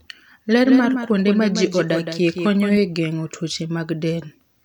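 From 0.65 s to 2.77 s the speech carries a doubled audio track: a second, full-band copy trailing by around 150 ms, roughly 10 dB down, with no decay or room colour. It cuts in and out abruptly, likely from a slower second capture path mixed in.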